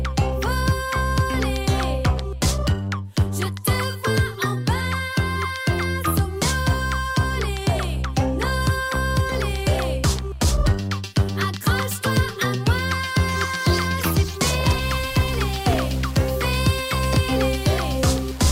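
From 14.82 s to the end at 18.51 s, the sound turns grainy and rough, with a gritty distortion that rises and falls with the signal, and the quietest passages either sputter or drop out to silence. The likely cause is low bit depth without dither: the audio was rounded to very few levels, which fits about 5 bits, so the rounding error tracks the waveform instead of spreading as smooth hiss, sitting only about 20 dB below the signal.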